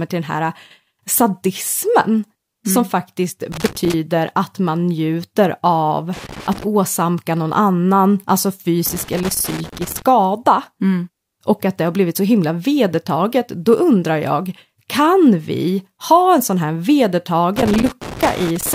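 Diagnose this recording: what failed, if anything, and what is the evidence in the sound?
The analogue wiring failed, with loose connector crackle. Irregular scratchy bursts cut into the speech at 3.52–3.94 s after "som faktiskt", 6.13–6.64 s, 8.86–10.02 s, and 17.56–18.74 s. A worn contact is making and breaking, chopping the signal.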